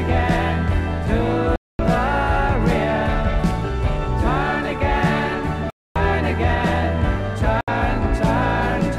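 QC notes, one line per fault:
1.56–1.79 s, 5.70–5.96 s and 7.61–7.68 s, Bluetooth dropout: audio packets likely failed to reach the headphones in time and were discarded, so the output falls silent for about 230 ms, 255 ms and 70 ms. Each gap opens and closes abruptly or with a fade of a few milliseconds, and the sound picks up further along rather than where it broke off, as if it had kept playing through the hole. The gap lengths fit losing runs of roughly ten, eleven and three packets.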